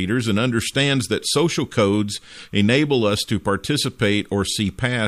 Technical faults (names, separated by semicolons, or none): timecode bleed